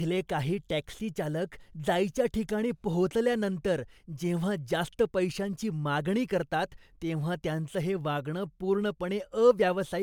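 From start to finish the speech has generation loss: a swirly, hollow smear, with consonant attacks blurred, more than a single MP3 pass near 135 kbit/s would cause. It's likely from roughly three lossy encodes stacked up, with nothing above 20.1 kHz.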